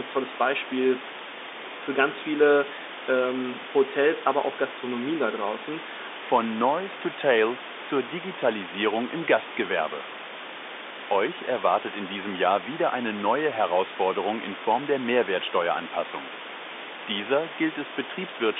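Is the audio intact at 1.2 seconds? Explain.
Yes, at 1.2 seconds the audio is intact, with only the room noise about 10 dB below the speech and the narrow telephone band of G.711 coding, both working as they should.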